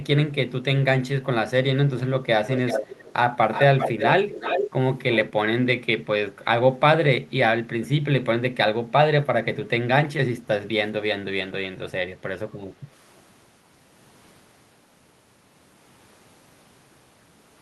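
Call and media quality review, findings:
Delayed second copy of the speech trailing by about 376 ms, a few dB under the direct sound, fainter at the end: 2.48–3.13, 3.52–4.09, 4.29–4.71, 5.14–5.25 s. Echo leak, likely the far-end loudspeaker's echo canceller letting residual pickup back through.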